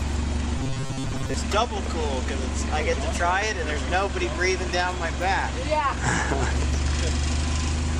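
Robotic sound from repeated short buffers runs from 0.58 to 1.34 s in this audio: the sound collapses into a rigid, metallic buzz at 134 Hz that only loosely follows the original. The likely cause is new audio arriving too seldom, so the playback side keeps looping the last short chunk, which fits a buffer of about 7.5 ms, while the real audio is skipped. Roughly two thirds or more of that stretch is repeated material.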